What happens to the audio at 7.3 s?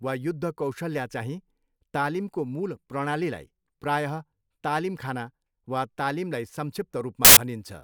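From 7.25 to 7.37 s, samples built from the wrong bytes turn fast-changing low bits into large values, giving a loud, harsh broadband noise burst: a full-height broadband block.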